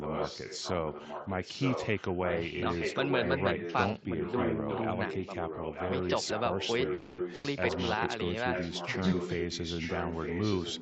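From the start to 4.86 s, and again from 5.06 to 8.12 s, a delayed copy of the speech runs under the direct sound, lagging by 920 ms and only slightly quieter than the original. This is echo leak, likely from a far end playing the call on a loudspeaker whose echo canceller let its microphone pick-up return down the line. A brief, much fainter trace of the same echo appears around 8.3 s, and it returns at full strength from 8.52 s to the end.

At 6.93 s the sound stalls for 250 ms, to 7.20 s, with the last sound stretched into a decaying buzz or hiss before the speech resumes where it left off. This is a call audio freeze, likely from packets arriving late and the jitter buffer running dry. Nothing is lost, but the 250 ms gap pushes everything after it later.

Shortly afterwards, from 7.34 to 7.46 s, a burst of packet loss removes 100 ms of audio. The receiver fills the hole by continuing the preceding sound and fading it, so a short held buzz or hiss replaces the missing material. 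Unlike the freeze, the speech picks up further along, with that 100 ms section gone.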